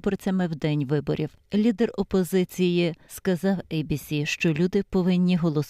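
From the first moment to the last, the sound carries a faint regular ticking at 20 per second. This is a resampler restarted on every block. The conversion from 48 kHz to 44.1 kHz was done on 50 ms blocks, each treated alone. At every block edge the converter lacked the true neighbouring samples. Each seam therefore carries a small error. The ticks follow the block rate and sit on top of the signal.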